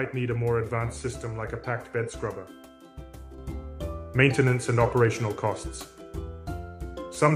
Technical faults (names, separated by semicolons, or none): sudden gain jump